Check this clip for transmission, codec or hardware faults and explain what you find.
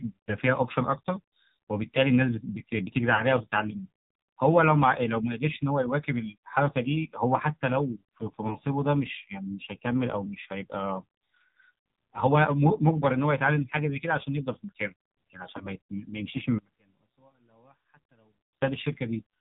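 Three problems stand out in this speech clip: heavy mobile codec coloring the whole way through, three brief dropouts, and a stretch near the end where the sound almost disappears.

The AMR narrowband mobile codec sits over everything. Nothing above 4 kHz gets through, so the speech is dull and boxy, and the damage is heavy: a buzzy, synthetic edge that fits one of AMR-NB's lower modes, around 5.9 kbps. At that rate the codec is rebuilding the voice from a rough vocal tract model and a handful of pulses rather than carrying the waveform, which is why it sounds manufactured rather than just muffled.

Lost AMR speech frames show up at about 3.16 to 3.24 s, 8.48 to 8.58 s and 15.58 to 15.68 s. Each one sounds like a single 20 ms frame went missing. The decoder bridges the gap by repeating its last good pitch and filter settings at a lower gain. You hear a quick dip or smeared warble lasting about a tenth of a second, and then the voice comes back a touch rough.

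From about 16.59 to 18.61 s the speech drops by roughly 35 dB, leaving only a faint remnant before it returns. That collapse is exactly what you'd expect if one stereo channel had been inverted in that section and then folded down to mono. The centered voice, identical in both channels, cancels almost completely, and only the small left-right difference survives. A polarity flip is the likely cause here.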